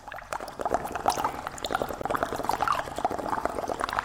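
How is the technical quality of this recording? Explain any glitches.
There is one audible glitch: a gap at a join of encoded pieces at 2.02 s. A silence of about 16 ms cuts into the continuous sound, with its edges smeared by the codec. The audio was encoded in separate segments and joined without trimming, so one segment's padded final frame and the next segment's start-up delay both remain as dead air. Unlike a dropout, where a stretch of audio goes missing, the sound resumes exactly where it stopped and nothing is skipped.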